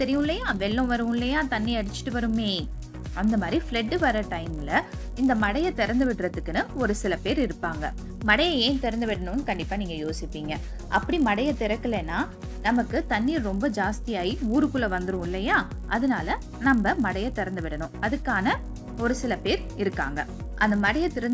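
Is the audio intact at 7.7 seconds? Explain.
No. A resampler restarted on every block runs throughout, so each 20 ms block edge, converted 44.1 kHz to 16 kHz in isolation, adds a 50 Hz buzz wherever signal is present.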